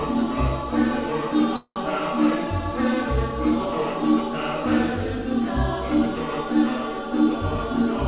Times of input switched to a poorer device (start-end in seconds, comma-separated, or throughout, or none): none